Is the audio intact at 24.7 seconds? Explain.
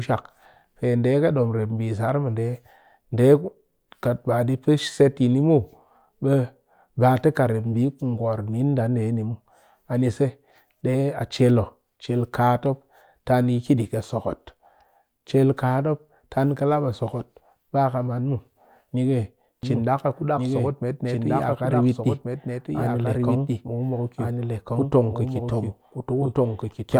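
No. A doubled audio track runs from 19.63 s to the end, covering 24.7 s. A second full-band copy trails about one and a half seconds behind, about 5 dB quieter, with no decay or room colour. It likely comes from a second, slower capture path.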